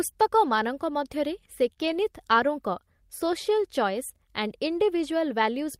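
Speech clip, with trouble right after "ମଧ୍ୟରେ ସେ". From 1.73 to 1.78 s there is short concealed packet loss: about 20 ms never arrived, and the decoder stretched the preceding sound into the hole, heard as a brief smear. Straight after, from 1.78 to 1.96 s, a lost packet is rebuilt from error correction. There is no gap, but the audio turns rougher and noisier, which fits roughly five packets replaced by low-bitrate backup copies rather than concealed.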